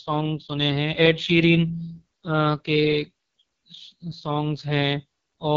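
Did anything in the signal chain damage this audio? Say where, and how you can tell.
Yes, at the codec stage. The AMR wideband (HD Voice) codec damages the speech throughout. Nothing sounds above 7.5 kHz. The voice is rough and raspy, which fits the lowest 6.6 kbit/s rate. Too few bits reach the pulse excitation, so detail collapses.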